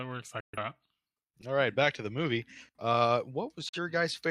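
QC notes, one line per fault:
0.40–0.58 s, digital broadcast dropout: the speech fades out in about 3 ms and stays silent until decoding resumes. The gap fits roughly three lost frames of about 43 ms each, muted after failed reception. On a waveform it is a flat line with a brief taper. A spectrogram shows a clean vertical band of silence across all frequencies.
3.69–3.79 s, digital broadcast dropout: a shorter hole of the same kind, consistent with a single lost frame. It has the same quick fade and flat full-band blank, and the speech picks up afterwards with the missing part gone.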